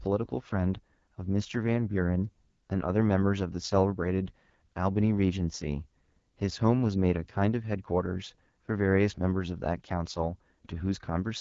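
Throughout, AMR wideband (HD Voice) codec damage makes the speech rough and raspy, consistent with an 8.85 kbit/s mode; the spectrogram shows nothing above 7.5 kHz.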